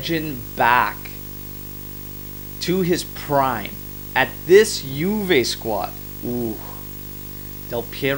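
Throughout the speech runs video or display buzz: a 50 Hz field-rate buzz with hash and a 15.6 kHz line tone, which sets it apart from plain mains hum.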